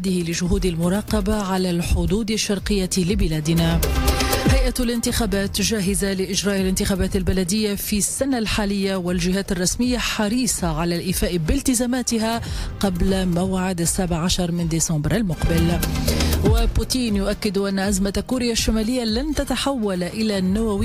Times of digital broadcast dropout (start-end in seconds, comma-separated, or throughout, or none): none